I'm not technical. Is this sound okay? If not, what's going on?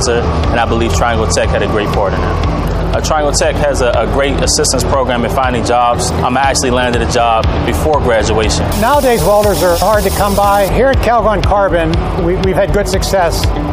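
Yes, this sound is okay, and nothing in it points to a technical problem. There is nothing here that needs fixing.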